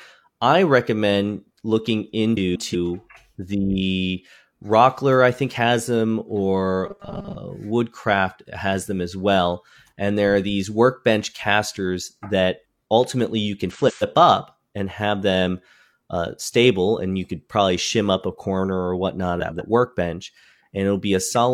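At 2.37 s the speech breaks into a garbled flutter that lasts until 2.75 s. This is frames out of order. Two neighbouring blocks of about 186 ms each were swapped and decoded in that order. The stretch plays with its halves exchanged. No time is lost.

From 6.86 to 7.36 s the speech turns into a rigid, metallic buzz near 200 Hz. It still roughly follows the speech. This is robotic sound from repeated short buffers. New audio likely arrived too seldom. The last 5 ms was replayed to fill the gaps. Most of the real audio in this stretch was skipped, and the repeat rate set the fixed pitch.

The same frames-out-of-order fault returns twice. From 13.71 to 14.03 s the swapped blocks are about 139 ms each. From 19.40 to 19.62 s they are about 93 ms each. Both sound like brief scrambled flutters.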